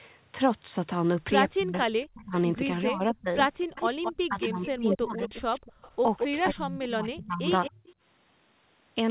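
A speech recording whose voice repeatedly dips sharply or drops out in pieces, at 1.57 to 1.75 s, 2.12 to 2.34 s, 2.76 to 3.28 s, 4.28 to 5.33 s and 6.31 to 7.82 s. This is likely speech suppressed in double talk: while the far side was also talking, an echo canceller could not tell this talker from loudspeaker echo and turned everything down. From 3.6 to 6.55 s a second copy of the voice trails about 217 ms behind, about 5 dB below the original, returning more quietly from 7.63 to 7.93 s. That is an echo leak, likely from a speakerphone whose canceller let part of its microphone pickup back into the call.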